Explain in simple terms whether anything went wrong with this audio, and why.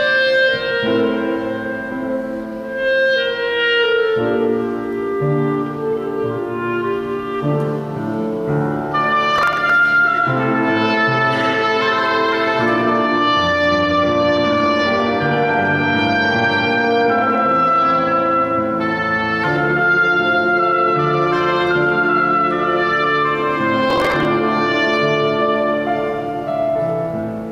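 Processor overload crackle appears twice, from 9.38 to 9.70 seconds and again from 23.90 to 24.25 seconds. Each time the computer was too busy to deliver the audio in tiny chunks on schedule, chunks that sound only a millisecond or two long. Many deadlines slipped in a row, and each missed chunk was simply skipped, leaving a tiny hard-edged hole. Strung together, those holes make a short, gritty crackle that stops once the overload eases.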